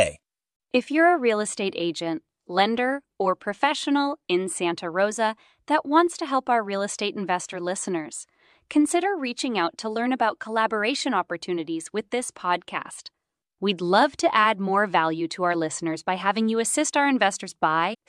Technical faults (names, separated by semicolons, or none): damaged data in a compressed stream